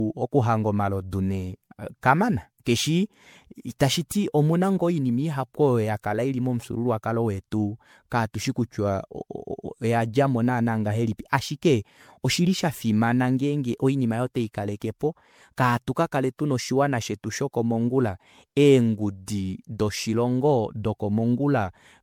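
Generation loss runs throughout the speech, from start to finish. The sound is swirly, smeared and hollow, with blurred consonant attacks and content stopping near 19.9 kHz, more degraded than a single MP3 pass at what sounds like 96 kbit/s would produce. The likely cause is repeated lossy re-encoding, perhaps around seven passes. Each decode and re-encode quantises again on a shifted frame grid, so noise and spectral gaps build on one another.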